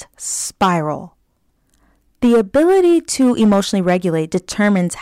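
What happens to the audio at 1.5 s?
At 1.5 s the speech carries on cleanly, with no dropout, click, distortion or other fault at that point.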